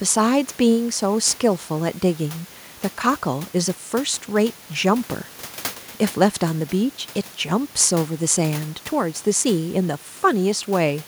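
No technical faults occur at any point in the speech recording.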